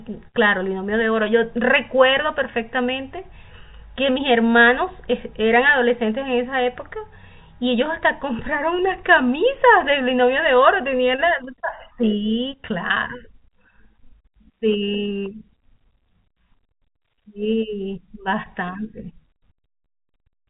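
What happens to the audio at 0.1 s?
Nothing goes wrong at 0.1 s; the speech there comes through intact, carrying only the narrow telephone bandwidth of its G.711 coding, with nothing above about 3.8 kHz.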